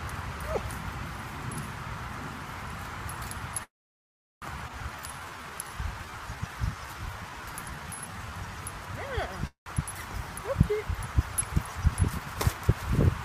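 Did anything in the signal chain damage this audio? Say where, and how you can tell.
Yes. The damage sits at the network and jitter-buffer stage of a call.

Call audio freeze at 3.63 to 4.44 s and again at 9.47 to 9.68 s. The sound stalls, then a brief fill fades to near silence for about 0.74 s and 0.12 s. It resumes where it stopped. Delayed packets likely starved the jitter buffer.

Skip ahead at 4.68 to 4.71 s. Playback jumps forward with almost no gap. About half a second of audio is gone and the two sides butt together. Packets were lost in transit, or dropped when the buffer overflowed.

Jitter buffer slow-down from 4.95 to 8.31 s. The audio runs at 84% speed, but the pitch holds. Sounds are drawn out. The receiver repeated pitch periods to rebuild its reserve, adding 544 ms.

Jitter buffer speed-up from 11.82 to 12.36 s. The audio runs at 110% speed with unchanged pitch, so it sounds hurried. 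The receiver cut short pitch-period pieces, about 70 ms in total, to shrink an oversized delay.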